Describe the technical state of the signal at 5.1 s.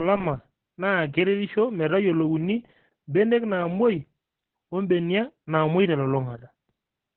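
At 5.1 s, as throughout, Opus voice compression: narrowband SILK coding, which fits about 8 kbps, removes everything above 4.5 kHz and coarsens the excitation, giving hoarse, robotic speech rather than a merely muffled low-pass.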